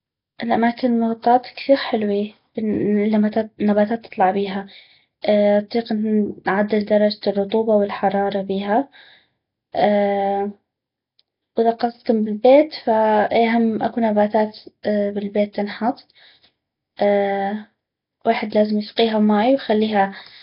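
Throughout the speech, heavy damage from likely Nellymoser compression, consistent with a rate near 22 kbps. Nothing sounds above 5.3 kHz, and noise fills the starved bands, giving a rough hissy halo and underwater smear, unlike the cleaner, metallic warble of MP3 artefacts.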